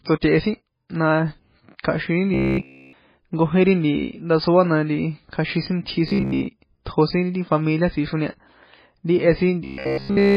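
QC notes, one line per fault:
Throughout: MP3 compression. A heavy watery swirl fits a very low bitrate near 16 kbps, likely from starved encoding, unlike brief dropouts.
2.34–2.93 s, 6.08–6.47 s, 9.65–10.36 s: robotic sound from repeated short buffers. A rigid 66.8 Hz buzz, likely from roughly 15 ms chunks looping, fully in the first and last runs and mostly in the middle run. It holds a fixed pitch, unlike codec swirl.
6.85 s: pre-echo. A 15 ms hiss smears in before a sharp attack because block-spread quantisation noise precedes the onset, unlike a click, which lands on it.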